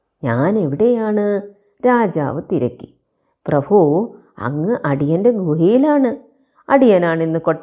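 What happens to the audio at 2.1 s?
Nothing goes wrong at 2.1 s; the speech carries on there without any dropout, click or other audible fault.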